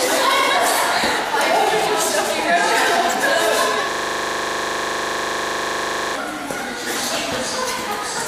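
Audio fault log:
3.91–6.15 s system hang loop: playback froze, one 40 ms slice repeats exactly, buzzing at 25 Hz; waveform shows identical blocks, spectrogram regular vertical stripes.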